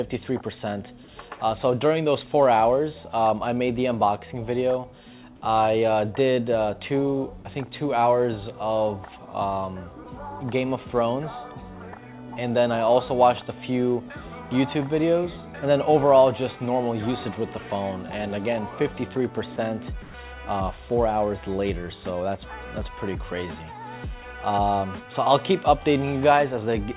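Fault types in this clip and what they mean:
Sound dropped by the voice detector: at 19.56–19.58 s a 20 ms slice, including 10 ms of actual sound, becomes flat noise, likely because the detector misread it as background. Unlike comfort noise, real content disappears.
Comfort noise in place of the background: from 20.02 to 20.14 s, background about 22 dB below the loud parts is likely swapped for featureless synthetic noise at the same level. No content is lost.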